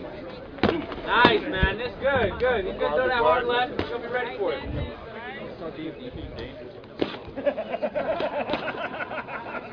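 No technical faults are audible.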